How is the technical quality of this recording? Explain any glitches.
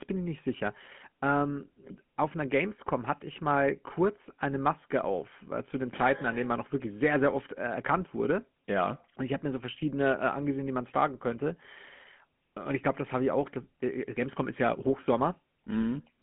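The recording has plainly audible codec damage across the whole speech clip. GSM full-rate codec damage runs throughout: pulse-driven vocal-tract coding, consistent with 13 kbps, leaves buzzy, gravelly roughness and nothing above 3.8 kHz, unlike clean telephone band-limiting.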